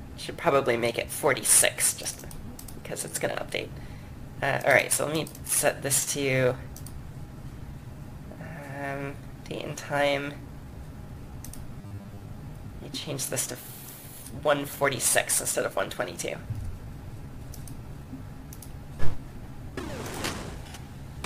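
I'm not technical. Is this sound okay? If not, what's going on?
No. From 11.81 to 12.23 s, new audio likely arrived too slowly, so the software repeated tiny 10 ms slices, giving robotic sound from repeated short buffers: a flat, metallic buzz.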